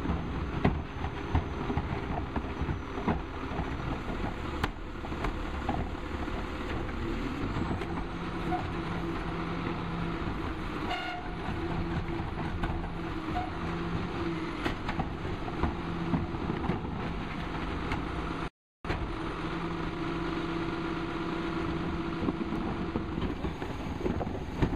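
At 18.48 s the sound stops dead for about 0.36 s, lasting until 18.85 s. This is a playback stall, most likely the player running short of data or its thread being held up. On a waveform it shows as a flat gap cut into the ongoing signal, and on a spectrogram as a blank vertical band across every frequency.

From 18.85 s to 20.29 s the audio comes back running 1.25 times too fast at its normal pitch. This is time-compressed catch-up. To clear the backlog left by the stall, the player drops short pieces and cross-fades the remainder together. On a spectrogram the harmonics stay level in frequency, but events are packed closer in time. The waveform envelope looks squeezed along the time axis.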